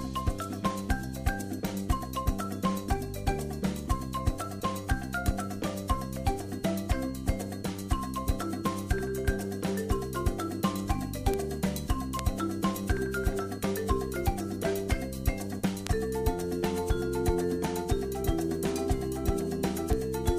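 The audio carries five isolated ticks, each a bit error spike, at 5.26, 11.34, 12.19, 15.87 and 19.93 s. A flipped bit throws a single sample, or a few in a row, a power of two off its true value before it snaps back. The first four reach about −10 dBFS and the last about −16 dBFS. On a waveform each is a lone needle, and on a spectrogram a thin vertical line spanning all frequencies, unrelated to the surrounding sound.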